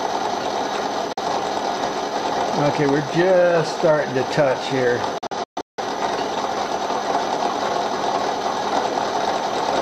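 At 1.13 s the sound abruptly drops out for about 43 ms, cut off by a 3 ms fade, and at 5.18 s it breaks into several short holes scattered across about 0.6 s, ending at 5.83 s, with 384 ms missing in total and the longest gap 171 ms. This is a digital broadcast dropout: the receiver lost the signal or got corrupted frames and muted until valid ones returned. The gaps point to one lost frame, then about nine, and that audio is gone.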